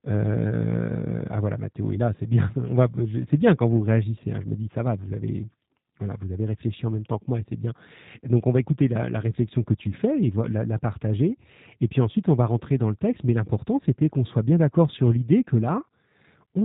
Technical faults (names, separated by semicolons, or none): G.729 codec